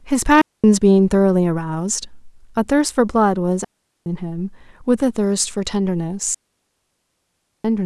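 At 0.41, 3.64 and 6.34 s, lasting 0.23, 0.42 and 1.3 s, digital wireless dropouts mute the speech into clean near-silent holes. Unlike analog dropouts, they have no noise bursts.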